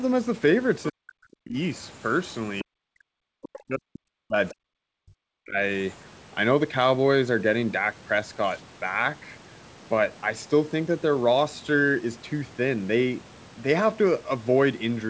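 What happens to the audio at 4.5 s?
At 4.5 s the talker's speech is inside a stretch of speech suppressed in double talk, running from 2.63 to 5.59 s. For about three seconds the level sinks, at its deepest roughly 40 dB down. The likely cause is the echo canceller hearing both sides at once, failing to separate the talker from the loudspeaker echo, and attenuating everything it picked up.

In the middle of that dip, from 4.48 to 4.54 s, a brief scrap of the other side's voice leaking through can be heard, sitting around 20 dB below the talker's level. It is a short fragment rather than a sustained second voice. This is most likely residual loudspeaker echo that the canceller failed to subtract from the microphone signal.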